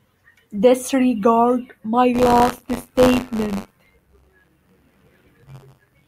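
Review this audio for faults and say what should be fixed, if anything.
From 2.13 s to the end, the speech takes on a steady robotic buzz at about 94 Hz, heard only while there is signal. This is buffer tearing. The writing program and the playback hardware have drifted so their positions cross inside every period, which fits a 512-sample buffer. A small slice of each buffer, roughly 5 percent, holds audio from about 40 ms earlier, with hard joins on both sides. Those joins repeat once per buffer, producing the rattle. To prevent it, keep the write pointer safely ahead of the read pointer with adequate buffering and resynchronise after any underrun or clock drift.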